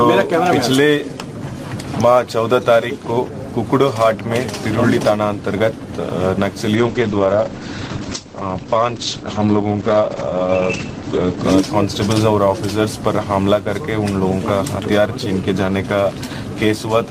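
From 6.77 to 11.49 s, a call bitrate drop makes things rough and muffled, losing everything above 8 kHz, which fits the encoder running near 9 kbps.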